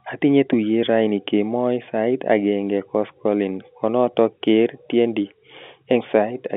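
No technical faults can be heard anywhere in the speech. It has the narrow sound of G.711 telephone coding, confined to the line band of about 200 Hz to 3.6 kHz, with any coding grain faint at most.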